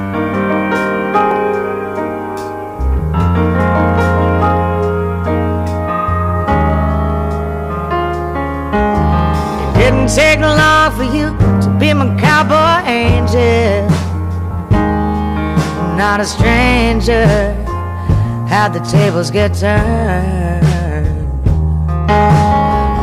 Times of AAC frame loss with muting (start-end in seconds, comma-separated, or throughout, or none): none